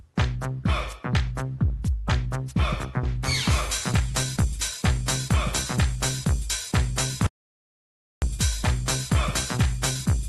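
The audio has passed through a call codec whose content stops near 12 kHz, which points to Opus at around 32 kbps, and it shows three faults. At 3.03 s a skip ahead drops roughly a second of audio and splices both sides almost directly. The waveform shows an abrupt seam, and the spectrogram shows a hard vertical discontinuity. From 3.91 to 4.80 s a jitter buffer speed-up trims short pitch-period pieces, removing around 70 ms, so the sound runs about 7% fast at unchanged pitch. Harmonic spacing stays constant while events crowd closer. From 7.26 to 8.22 s an audio dropout to silence cuts about 0.96 s to silence, likely from lost input. The waveform goes flat and the spectrogram shows a dark band with no room tone.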